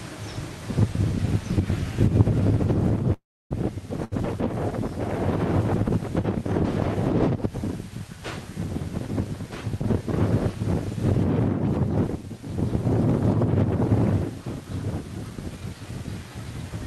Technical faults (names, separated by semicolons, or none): call audio freeze; short stall from a late packet; jitter buffer speed-up